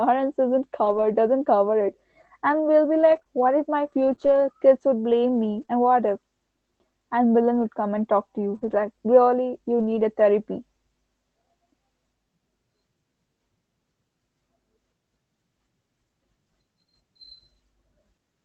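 Between 0.85 and 10.0 s, ending just before "a therapy", the call path lost or received late about five packets, one here and one there. These are scattered short gaps. The receiver covered each hole by extending the sound that came before it, roughly 100 ms in total, with none longer than about 20 ms. In the speech this comes through as brief ticks, slight smears or small hiccups, and most of that stretch stays clear. The Opus call audio is band-limited to 8 kHz.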